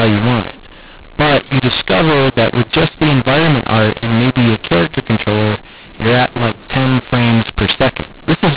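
A speech recording carries a mu-law and A-law mix-up throughout. Audio coded as A-law is decoded as mu-law, scrambling levels, so speech sounds harsh and distorted and pauses fill with noise. The band stops near 4 kHz, which fits 8 kHz G.711 telephone coding.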